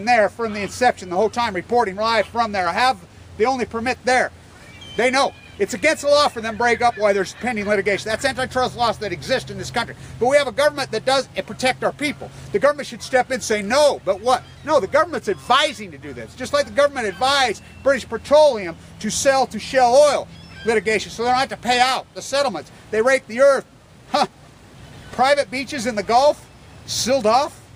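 No technical faults can be heard anywhere in this audio.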